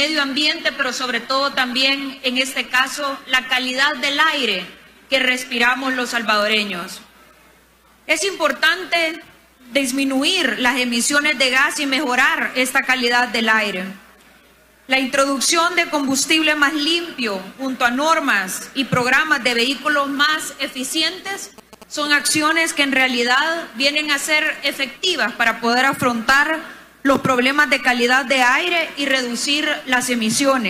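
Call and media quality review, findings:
Adaptive stream starting at a low bitrate, 0.0 to 6.0 s: dull, smeary start, treble missing or synthetic, stronger codec artefacts. Sounds like a 20 kbit/s HE-AAC rung. Player then jumps cleanly, no gap, to something like 96 kbit/s AAC-LC. Nothing above 14.9 kHz.

GSM signalling bursts, 21.26 to 22.31 s: galloping dit-dit-dit of short 217 Hz buzzes, roughly 20 dB under the programme. A nearby 2G phone doing signalling chatter, RF rectified somewhere in the audio chain. Probably worth shielding or keeping phones away.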